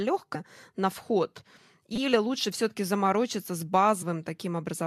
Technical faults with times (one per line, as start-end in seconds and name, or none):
0.34 compressed frames skipped
1.96-1.98 repeated buffer
4.01 compressed frames skipped